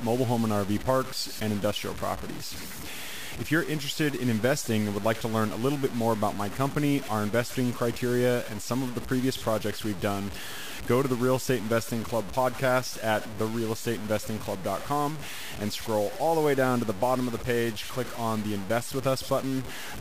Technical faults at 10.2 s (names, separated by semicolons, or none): low bit depth without dither